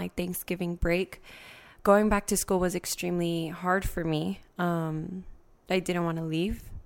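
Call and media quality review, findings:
No audible faults found.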